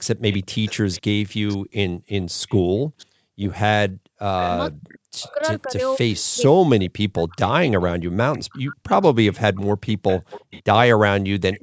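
From 0.32 to 6.24 s, a delayed copy of the speech returns about 526 ms behind the original, roughly 20 dB quieter. This is an echo leak. The likely cause is a far-end loudspeaker whose echo canceller let part of its microphone pickup through.

Between 0.54 and 4.19 s, the room sound falls away in dips, the deepest about 40 dB. Together they last around one and a half seconds. This is background gated by the echo canceller. While the loudspeaker played, the canceller pulled the microphone down hard.

From 4.74 to 8.99 s, the talker's speech weakens and breaks up while the other side is talking. The deepest dips reach roughly 40 dB, about three seconds in total. This is speech suppressed in double talk. The canceller likely could not separate voice from echo.

The echo leak returns from 7.33 to 10.62 s, now about 550 ms late and again roughly 20 dB down. A last trace appears at 11.53 s and runs to the end, delayed about 560 ms. 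The upper band stops near 8 kHz, normal for call microphone processing.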